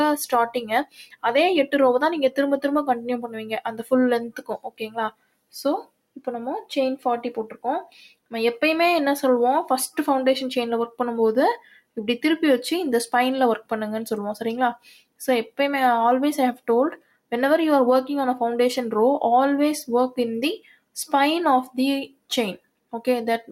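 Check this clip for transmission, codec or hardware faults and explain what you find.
The audio shows a speech noise suppressor acting on non-speech sound, with eight deeper cuts.

A noise suppressor applied to music or sounds runs through the whole clip. It treats steady tones and tails as noise. Gain swings by around 10 dB. Attacks pass, but held sound sinks, so the level pumps and thins.

Sound cut by the noise suppressor appears at 0.85–1.24 s, 3.26–6.22 s, 7.52–8.33 s, 11.58–11.97 s, 14.77–15.59 s, 16.55–17.32 s, 20.58–20.96 s and 22.08–22.93 s. The first drop reaches about 20 dB. The rest reach about 21 dB. Sustained parts dip sharply, and decays are cut short.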